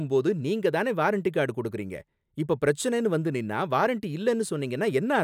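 Speech recording with no audible technical faults anywhere.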